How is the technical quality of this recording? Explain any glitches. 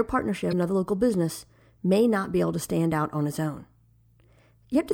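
The recording has one glitch near the start. At 0.49 to 0.53 s, just before "another local business may", there is a short burst of damaged data in a compressed stream. It lasts about 44 ms. Some bytes in the encoded speech were corrupted there. The decoder could not read those frames properly, lost its place, and had to hunt for the next valid frame header. The result is a brief chirp, squawk, click or short hole cutting across the speech.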